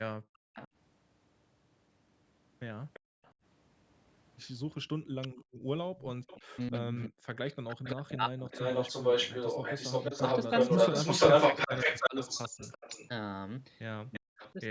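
At 0.34 to 0.38 s an echo leak appears, likely from a far-end echo canceller that let loudspeaker pickup through. A faint copy of the speech returns 343 ms late, far below the direct level. From 0.37 to 0.68 s the speech is suppressed in double talk: with both sides active, the canceller likely cuts the talker very deeply, and the speech dips over about 0.3 s. From 2.93 to 14.52 s the echo leak returns in force, a 343 ms delayed copy about as loud as the speech or slightly louder, which produces a doubled sound. At 3.00 to 3.22 s and 5.44 to 5.64 s the background is gated by the echo canceller, which clamps the microphone while the loudspeaker plays. The room sound falls by about 29 dB and then about 26 dB for roughly 0.2 s each. Double-talk suppression recurs from 6.36 to 8.53 s, chopping about 1.5 s of speech, and from 12.09 to 14.60 s, removing roughly 0.4 s in deep dips.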